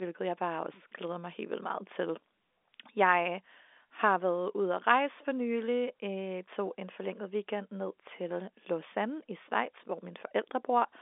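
Nothing goes wrong anywhere here; the speech just sits in the usual narrow telephone band, about 300 Hz to 3.6 kHz with nothing above roughly 3.8 kHz, exactly what you'd expect from a normal G.711 A-law phone line.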